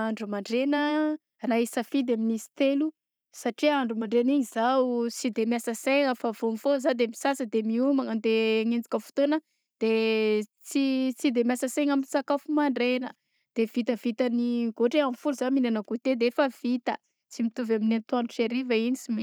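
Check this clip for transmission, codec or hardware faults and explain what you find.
Nothing faulty can be heard in this speech recording.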